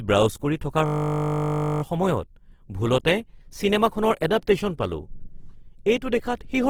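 From the start, the whole speech clip carries a grainy, rough texture, likely from Opus compression. Its music (CELT) mode keeps every band's energy but fills starved bands with folded or noisy content, which fits a low rate near 16 kbps. A spectrogram shows full bandwidth reaching about 20.2 kHz, with few holes but speckled, noise-like detail.

From 0.86 to 1.82 s a system hang loop takes over. The playback hardware kept cycling the same 20 ms buffer while the system froze, so one fragment repeats 48 times as a steady 50 Hz buzz. The waveform shows one identical 20 ms shape tiled end to end, and the spectrogram shows evenly spaced horizontal lines at multiples of 50 Hz. Essentially no audio is lost afterwards.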